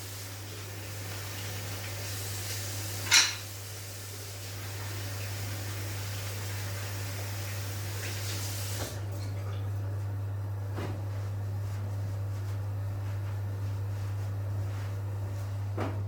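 Nothing here catches the ear as a fault; the sound just carries on the whole way with no glitches, dropouts or odd artefacts to point to.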